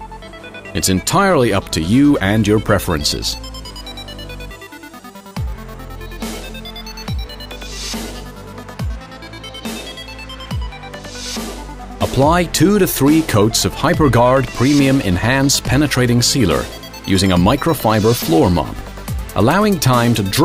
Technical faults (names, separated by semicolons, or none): none